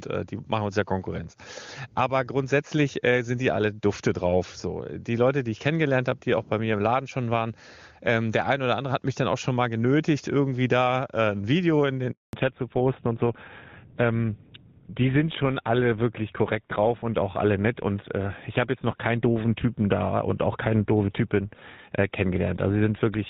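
At 12.11 s, right after "in den", the speech stops for a handover gap lasting 220 ms, until 12.33 s. While the call was being passed from one network to another, no speech frames got through, so the sound fades within a few tens of milliseconds and then goes completely silent. A packet-loss dropout is usually patched over with smeared or repeated sound. This gap is clean, unfilled silence, and whatever was said during it is gone.

From 12.33 s to the end, the call falls back to narrowband. Before the switch, the HD Voice (AMR-WB) path sounds clear, with the rate pointing to its top 23.85 kbit/s mode. Afterwards, nothing above 4 kHz remains, which fits a move to GSM full rate, and the speech turns duller and rougher. A simple low-pass filter would only muffle the sound. Here the codec itself changes, so a coarser, grittier texture arrives along with the lost bandwidth, and it starts exactly where the gap ends.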